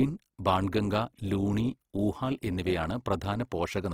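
Speech throughout, carrying plainly audible Opus compression: the whole clip sounds grainy and rough, with bands filled by noise rather than left hollow, so it lacks MP3's swirling holes while keeping full bandwidth. This likely comes from Opus music-mode coding at about 16 kbps.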